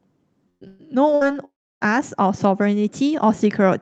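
From 0.49 to 0.64 s, 0.67 to 0.82 s and 1.15 to 1.24 s there are bursts of packet loss. Each gap of about 120 ms (60 ms in the third) is bridged by stretching the last speech into a buzz or hiss that fades, and the first one falls silent for about 80 ms. These gaps are short and the speech picks up again past the skipped part. That sets them apart from a dropout.

From 1.45 to 1.84 s the sound is very different. A brief fading continuation gives way to about 300 ms of near silence before speech returns, with roughly 360 ms of audio skipped. That is likely a long network dropout, where nothing arrived for long enough that the concealment gave up. The audio's high-frequency cut-off, consistent with an 8 kHz-bandwidth call codec, is present throughout.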